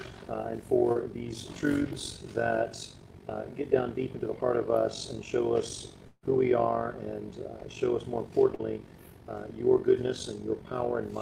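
Throughout the clip an overlap-add ripple makes the level swing by about 11 dB roughly fifty times a second, because frames were rejoined with an overlap that doesn't sum to a steady gain. It sounds like a rough, robotic flutter, and a waveform shows a regular comb of amplitude dips.

At 0.91 s and again at 8.55 s there is a short concealed packet loss. About 40 ms never arrived and was patched by extending the preceding sound. Each gap is heard as a brief smear or wobble and shows on a spectrogram as a narrow band of smoothed, repeated texture.

From 6.07 to 6.25 s the sound turns into a fading buzz or hiss that ends in about 30 ms of silence before the audio resumes with a piece missing. A long network dropout is the likely cause, with the receiver stretching the last sound across about 160 ms of lost audio. On a spectrogram this appears as a frozen, decaying texture followed by a short blank column.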